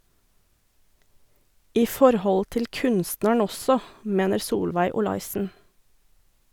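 A short speech clip that, from 4.91 to 5.45 s, suddenly plays about 5.7% fast, raising pitch by 96 cents, close to a semitone, before snapping back. This is likely a drift correction step, where clock-matching software briefly changed the playback rate to rebalance its buffer. On a spectrogram the harmonic stack jumps upward as a block for that half-second and then drops to its former spacing. The waveform shows slightly compressed cycles over the same span.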